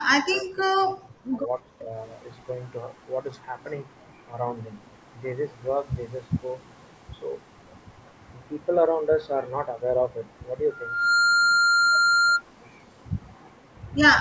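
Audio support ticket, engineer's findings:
Speech suppressed in double talk, 0.18–1.49 s: talker's level collapses, roughly a second of it gated, deepest drop about 40 dB. Likely echo canceller treating overlapping far-end audio as echo and attenuating near-end along with it.

Second instance, 1.82–1.96 s: brief dip of about 10 dB, likely same mechanism, shorter overlap. Call mic processing band-limits everything to 8 kHz; not a fault.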